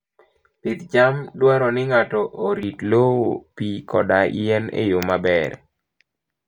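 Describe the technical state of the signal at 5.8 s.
At 5.8 s the signal is intact, with no audible technical fault at that moment.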